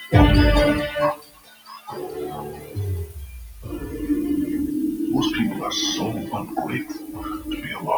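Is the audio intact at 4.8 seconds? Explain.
No, not at 4.8 seconds. Low bit depth with dither runs through the whole clip. The coarse rounding shows up as a steady, even hiss that sits only about 15 dB below the sound, which fits roughly 7-bit audio. A speech-tuned noise suppressor is also active throughout. It mistakes sustained parts and tails for noise and pulls them down by around 10 dB, so the sound pumps and thins between attacks.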